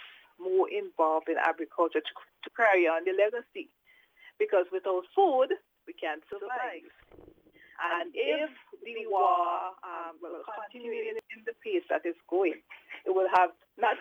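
From 6.33 to 11.19 s there's channel delay doubling: one side runs about 93 ms late, likely a 4096-sample buffer, so the mono sum slaps back as an equal-level echo.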